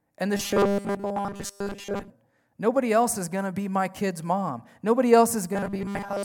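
From 0.36 to 2.10 s, just after "and the", the speech turns into robotic sound from repeated short buffers, and it returns from 5.53 s to the end of the clip. Both stretches carry a rigid, metallic 200 Hz buzz that roughly tracks the words. That points to a 5 ms chunk being replayed, likely because new audio arrived too slowly, with most of the real signal skipped and replaced by repeats.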